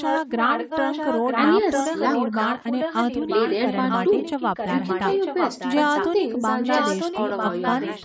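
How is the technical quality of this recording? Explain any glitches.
The recording has a strong echo leak through most of its length: 0.0–1.5 s, 1.72–3.53 s, 3.7–5.01 s, 5.21–5.75 s, 5.94–6.09 s and 6.63–8.05 s. A second copy of the speech trails the original by 948 ms at only about 5 dB below it, so the voice seems to talk over itself. The likely cause is a loudspeaker on the far end whose echo canceller let its microphone pickup pass back. On a spectrogram, each harmonic pattern reappears nearly a second later. On the waveform, the gaps between phrases fill with a slightly weaker duplicate envelope. The call processing band-limits the audio, leaving nothing above 8 kHz.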